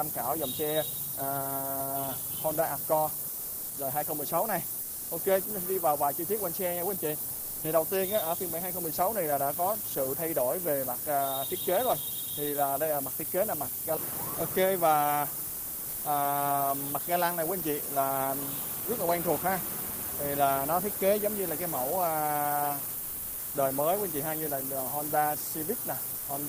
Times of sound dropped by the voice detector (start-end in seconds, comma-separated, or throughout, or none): 3.31-3.67, 4.85-5.09, 7.37-7.61, 15.53-16.01, 23.03-23.51, 26.21-26.27